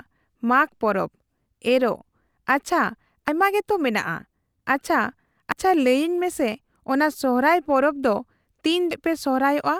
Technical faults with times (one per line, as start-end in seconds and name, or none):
3.28 damaged data in a compressed stream
5.52 damaged data in a compressed stream
8.91 damaged data in a compressed stream